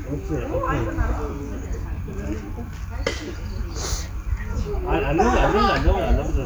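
No technical faults can be heard anywhere in the audio.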